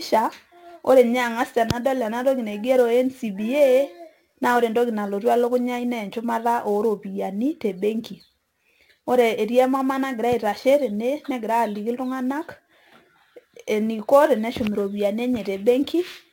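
Sample clock jitter runs through the whole speech recording. The converter's clock wanders in timing on the order of ten microseconds, so each sample lands slightly off its proper instant. The resulting error follows how fast the waveform is changing, sitting roughly 25 dB under the signal. It comes across as a grainy hiss riding on the voice, strongest on loud passages and sibilant, high-frequency content, and it drops away entirely in the pauses.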